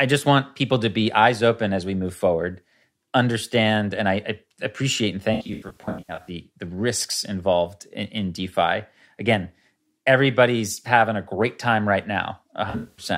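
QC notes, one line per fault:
5.34–6.29 s, AAC frame loss with concealment: about 0.51 s of audio lost in scattered gaps, the longest around a tenth of a second. The decoder re-uses the last good spectrum with scrambled phase, so the sound turns smeared and noisy. The spectrogram shows blurred, flattened patches, and the waveform loses its envelope detail there.
12.70–13.05 s, AAC frame loss with concealment: about 0.21 s lost across 0.28 s, again in gaps of up to roughly a tenth of a second. Concealment stands in for the missing frames, giving brief phasey smears. These show as smudged spectrogram columns and a softened waveform envelope.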